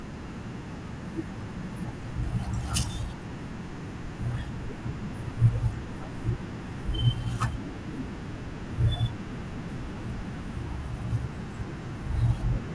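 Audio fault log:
No fault is heard in this speech clip.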